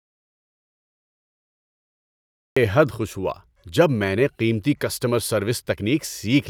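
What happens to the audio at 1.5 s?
At 1.5 s the clip is in the middle of an audio dropout to silence that is already under way when the recording begins and lasts until about 2.57 s, when the speech returns mid-flow with "حد خوش ہوا جب". Through that stretch the signal is silent, with no room tone or hiss, most likely because the input was lost while the recorder kept writing empty samples. On a waveform it is a flat line, and a spectrogram shows a blank, empty band before the speech energy appears abruptly.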